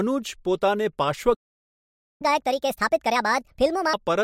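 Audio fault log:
1.34–2.22 s, playback stall: the speech cuts out mid-flow and the output stays silent for about 0.86 s. The player had no audio to send, likely because its buffer ran dry or its thread was blocked. Nothing new reaches the output until it recovers. The speech then resumes, so the gap is heard as a plain hole in the flow.
2.22–3.93 s, catch-up at higher speed: when the speech returns it runs at 1.5 times normal speed. The pitch climbs with it, by roughly seven semitones. The player is draining its backlog by resampling, which speeds up the timing and raises the pitch together. This wins back lost time. At 3.93 s speed and pitch drop back to normal.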